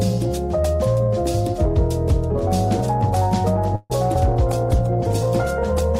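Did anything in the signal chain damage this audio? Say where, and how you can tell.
Yes. At 3.75 s the sound stops moving forward and the last moment is stretched into a fading buzz for about 144 ms, with roughly 10 ms of near silence, before normal audio resumes at 3.92 s. This is a call audio freeze at the network and jitter-buffer stage, likely from packets arriving late. Nothing is lost; playback simply sits about 144 ms later. A spectrogram shows smeared, repeating bands decaying into a faint gap.

At 4.14 to 4.17 s there is a brief smear where short concealed packet loss occurred, again a network fault handled by the decoder. About 40 ms of audio never arrived in time. Only about 10 ms was synthesised from the preceding sound before it blended back, so the stream jumps ahead and the delay shrinks by a few hundredths of a second. The waveform shows a small discontinuity, and the spectrogram a blurred sliver.

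From 4.49 s to the end the texture turns rough and muffled. This is a call bitrate drop at the codec stage. The bandwidth estimate fell and the Opus encoder went from 64 kbps to 15 kbps, staying at the bottom for about 1.5 s. At that rate the coding is coarse and the top of the spectrum is discarded. A spectrogram shows a sudden flat ceiling on high-frequency energy, with blocky, grainier detail below it.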